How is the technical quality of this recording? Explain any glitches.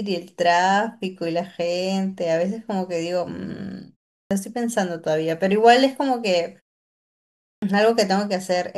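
Speech resumes twice with its opening cut away, a clipped start after a pause. At 4.19 s, after a 0.31 s gap, about 118 ms is missing up to 4.31 s. At 7.50 s, after a 0.97 s gap, about 124 ms goes up to 7.62 s. The output device dozes during silence and takes that long to wake, so the sound bursts in abruptly without its first sounds. Muted pauses differ: there the background drops during gaps, but the fade lifts in time and nothing is lost.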